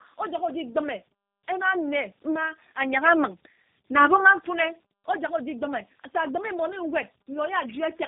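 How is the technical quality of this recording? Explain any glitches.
Quality is poor throughout, from one fault. Tandem speech coding runs the whole clip. The sound points to about three speech codecs in a row, ending in G.729A. Each re-encodes the previous one's damage. Speech sounds rough, warbly and muffled, with nothing above 3.7 kHz.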